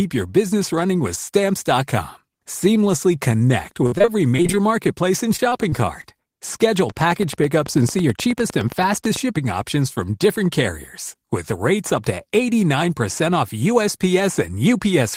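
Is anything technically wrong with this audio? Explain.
Yes, the clip has three kinds of fault.

From 3.86 to 4.63 s and again from 5.36 to 6.15 s there is repeated packet loss, heard as robotic sound. In the first stretch eight short holes, the longest 57 ms, are patched by extending the preceding sound, so about a quarter of that span is concealment. The second stretch has five holes of up to 22 ms, about 11% concealed. The speech turns choppy, with fragments missing.

A train of clicks runs from 6.79 to 9.17 s. It is about twenty near-identical pulses at a regular rate of roughly 9.1 per second, peaking around 10 dB above the speech. The steady pace suggests the likely cause is electrical interference or a faulty connection injecting a pulse at a fixed interval. It sounds like a ticking laid over the speech that continues through the pauses.

Inside that stretch, from 7.96 to 8.45 s, a jitter buffer speed-up occurs. 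The receiver had built up excess buffered audio and trimmed it by cutting short pitch-period segments, roughly 40 ms in total. Playback runs at about 108% speed with pitch unchanged, so that half-second of speech sounds hurried.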